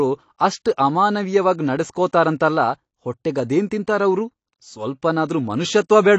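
Across the whole speech recording the top end stops abruptly at about 8.6 kHz, and the damage is plainly audible: sibilants turn fizzy and smeared, and sustained vowels carry a warble. This pattern points to AAC compression, likely AAC-LC at a low rate, which fits a bitrate around 32 kbps. Short of bits, the encoder drops everything above the cut-off and quantises the remaining frequency lines coarsely, leaving gaps that swirl from frame to frame.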